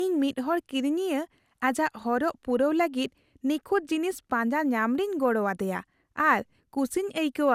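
Generation loss runs throughout the speech. Attacks blur, and the sound turns swirly and hollow, likely from about five successive re-encodings, consistent with MP2 at 128 kbit/s. A spectrogram shows nothing above 16.6 kHz, with smeared transients.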